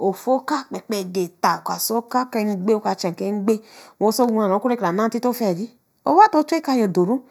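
From start to finish the speech carries channel delay (comb filtering): one channel trails the other by a fraction of a millisecond, and summing them cancels shared content at evenly spaced frequencies, the first near 3 kHz. The result is a fixed, hollow, slightly dulled tone throughout.

Between 4.24 and 4.31 s a loud pop occurs as two sharp clicks in quick succession, peaking a few dB above the speech, just before "oku ɛke kra naa". The speech continues underneath. The likely cause is a brief voltage spike from a switch, connector or driver glitch.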